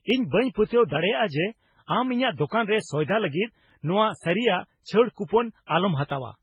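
Throughout, the speech shows transcoding between lossy codecs. Nothing survives above 10.7 kHz, and the mixed smearing points to a likely MP3, Vorbis, then HE-AAC chain. From 0.10 s to 6.10 s, clock drift buffer slips give a click every 0.6 s, about ten in all. Two mismatched clocks are the likely cause, each slip dropping or repeating a few samples.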